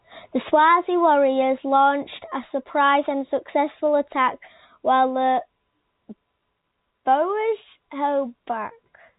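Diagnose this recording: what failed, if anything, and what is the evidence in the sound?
Nothing failed in this recording, and the sound gives no evidence of a fault.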